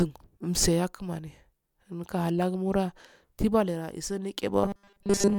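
From 4.64 s to 5.39 s, new audio likely stopped arriving often enough, so playback kept repeating its last short buffer while most of the real signal in that stretch was skipped. This is robotic sound from repeated short buffers. The loop recurs every 5 ms, which imposes a fixed 200 Hz buzz on the speech and turns the voice into a rigid, metallic buzz that only loosely follows the speech until the clip ends.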